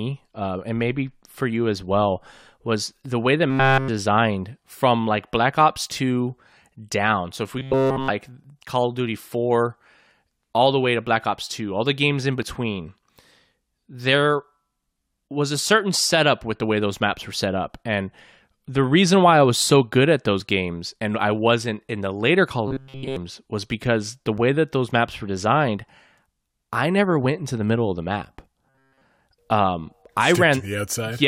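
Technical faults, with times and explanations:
3.50–3.88 s, 7.59–8.11 s (just after "if we"), 22.68–23.16 s (just before "was because the") and 28.69–29.01 s: robotic sound from repeated short buffers. For roughly a third to half a second each time, the sound turns into a rigid metallic buzz pitched at 134 Hz. That pitch corresponds to a loop of about 7.5 ms being replayed, which points to a short buffer being repeated while incoming audio is skipped. Almost nothing new gets through during these stretches. The likely cause is audio arriving too seldom. Unlike a segment overlap, this is a sustained tone, not a momentary tick.
8.44 s, 12.43 s and 24.38 s (between "was because the" and "that those maps were"): overlap between stream segments. Each event is a single click or tiny skip where a few milliseconds are cut out and the waveform jumps. The spacing follows a 4-second grid, consistent with 4-second stream segments whose boundaries overlap and are trimmed. 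Compared with the robotic passages, these are instantaneous and carry no pitch or buzz.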